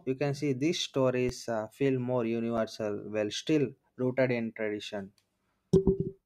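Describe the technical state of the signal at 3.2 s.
At 3.2 s the speech signal is intact, with no audible dropout, clipping, distortion or other technical fault.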